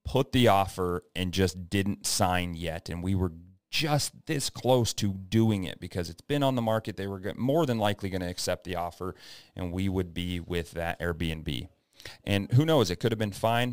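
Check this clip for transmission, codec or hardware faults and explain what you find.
One fault runs through the whole recording. Crude rate conversion, throughout: samples were repeated rather than filtered, which fits a jump from 32 kHz to 44.1 kHz. An inharmonic fizz sits about 20 dB below the speech and tracks its louder, brighter moments.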